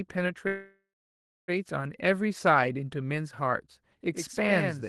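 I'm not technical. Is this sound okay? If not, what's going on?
No. There are two separate problems in this speech clip.

The first is a call audio freeze, from 0.47 s to 1.5 s. The sound stalls for about a second. The last bit of audio is stretched into a fading buzz, followed by roughly 0.64 s of silence, and then the speech carries on exactly where it stopped. Nothing is lost, but everything after that point arrives a second late. The likely cause is network data being held up, so the call software ran out of audio to play and had to fill the wait.

The second is a doubled audio track, from 4.13 s to the end. A second copy of the same audio runs about a tenth of a second behind the first and a little quieter, giving a hard, slap-back echo rather than a natural room echo. It cuts in abruptly and continues to the end. The likely cause is the same audio being picked up twice, once through a slower route, or two copies left slightly out of step in an edit.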